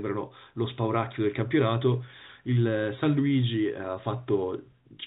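Nothing goes wrong anywhere in the speech here; it just carries the narrow telephone sound of G.711 coding, with nothing above 4 kHz and only a faint hiss riding along with the level.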